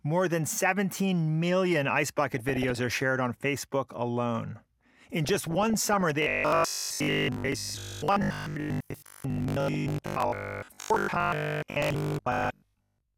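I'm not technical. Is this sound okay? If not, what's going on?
No. Two problems can be heard. DAB burbling appears at 2.32 to 2.98, 5.25 to 6.12, 7.52 to 8.00, 9.16 to 10.13 and 11.75 to 12.50 seconds. Weak digital radio reception lets a few damaged bits through, producing bursts of short noise blips that come and go over the speech.

Robotic sound from repeated short buffers runs from 6.22 seconds to the end. The voice becomes a rigid, metallic buzz at a steady 50 Hz. Unlike the burbling, it doesn't come and go in bursts. The likely cause is new audio arriving too slowly, so the player keeps repeating the last 20 milliseconds and most of the real sound is skipped.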